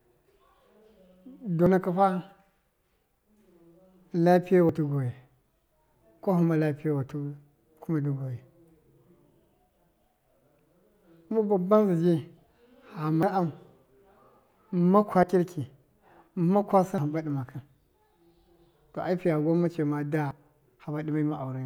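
At 1.66, 4.69, 6.19 (just before "kwahɨma lappiyewatɨ"), 12.37, 13.23, 15.23, 16.98 and 20.31 s, the speech jumps ahead, each time losing a short slice, roughly 40 ms at most points and around a tenth of a second or more at 13.23, 16.98 and 20.31 s. This is likely a dropped buffer (overrun), where unread input was overwritten. On the waveform each shows as a sharp discontinuity without any gap, and on the spectrogram as a thin vertical broadband line.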